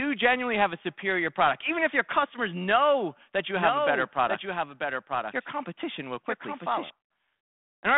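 Right after "customers know that you", from 3.56 to 6.90 s, there's a doubled audio track: a clean copy about 5 dB down trails roughly a second behind, likely a second capture path, starting and stopping abruptly. Around 5.15 to 5.20 s, bit errors on the ADPCM link throw the decoder off, giving a rough, poppy burst with a brief level wobble.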